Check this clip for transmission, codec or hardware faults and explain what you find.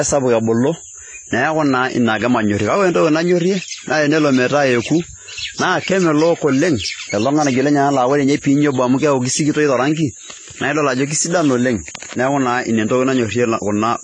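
One fault runs through the whole clip: AAC compression damage. From start to finish the speech sounds dull and smeared, with a watery, fizzy texture on sibilants and held vowels, and nothing is present above about 9.6 kHz. The likely cause is AAC-LC coding at a low bitrate, which fits roughly 24 kbps. Short of bits, the encoder lowers its cut-off and quantises the remaining spectral lines coarsely, leaving gaps that smear detail and make the top end warble.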